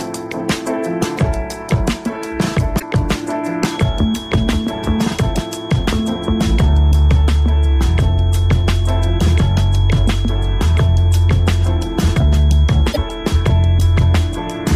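At 2.76 to 2.83 s a short glitch cuts through the sound. This is damaged data in a compressed stream: some bytes of the coded file are wrong, so the decoder misreads those frames, loses sync and hunts for the next valid header.

From 3.60 s to the end, a thin, steady whistle at 3.3 kHz sits about 20 dB below the main sound and swells and fades slowly in level. It is likely a feedback whistle, with the loudspeaker-to-microphone loop held just at the edge of feedback so that one frequency keeps ringing without building up. Mains hum sits low at 50 or 60 Hz, and an electrical tone holds a perfectly fixed level. This whistle is high and drifts in level.

At 12.89 to 12.98 s the corrupted-stream glitch returns, heard over the ongoing whistle.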